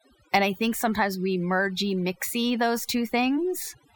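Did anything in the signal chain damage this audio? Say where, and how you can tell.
Yes, overdone noise removal in the call processing, throughout. Pauses sink to near silence with twinkling specks. Aggressive suppression cuts quiet voice detail.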